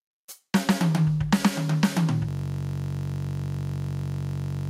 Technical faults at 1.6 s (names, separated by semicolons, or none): gain pumping